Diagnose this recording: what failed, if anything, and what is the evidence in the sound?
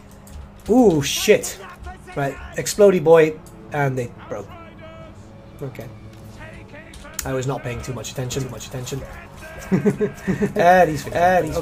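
A doubled audio track appears abruptly at 8.32 s and runs to the end. A second full-band copy of the sound trails the original by about half a second, a few decibels quieter, with no decay or room colour, so it reads as a hard echo rather than reverberation. On a spectrogram, every event repeats as a ghost shifted right by that fixed gap. On the waveform, the envelope doubles from 8.32 s onward. The likely stage is capture or editing, where a slower path or misaligned edit mixed in a second copy.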